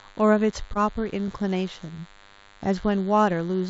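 Under the whole speech clip sits a DECT cordless phone buzz: a thin, steady drone at 100 Hz, rich in harmonics, about 25 dB below the speech. A nearby handset or base transmits a burst every 10 ms, and the audio circuitry rectifies it. Its fixed pitch and constant presence set it apart from mains hum at 50 or 60 Hz, which is duller and carries fewer high harmonics.

From 0.74 to 0.77 s there is a short concealed packet loss. About 20 ms of audio never arrived, and the receiver extrapolated the preceding sound for roughly 12 ms before blending back into the real signal. It is heard as a soft smear or wobble rather than a hard click, because the gap was papered over instead of silenced.

At 1.28 s and again at 2.65 s comes a repeated buffer. A block of about 10.7 ms, which fits a 512-sample buffer, plays twice when fresh audio was late. Each repeat has an abrupt join and is heard as a tiny click or buzz-like tick. 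The duplicated content and hard edges separate it from the blended, synthetic fill of concealment.

Within the call path's band, which stops at 8 kHz, these artefacts sit alongside the codec's ordinary coding noise.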